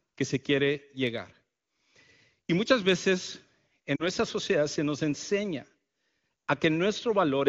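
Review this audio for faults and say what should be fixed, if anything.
Lost AMR speech frames at 3.96 to 4.05 s, between "muchas veces" and "sociedad se nos enseña": about 40 ms fails its checksum, which fits two 20 ms frames. The AMR wideband decoder reuses the last good pitch and vocal tract settings at falling gain, producing a fade to near silence within the two frames before the audio resumes. To prevent this, improve radio link quality or strengthen channel error protection so that frames arrive intact.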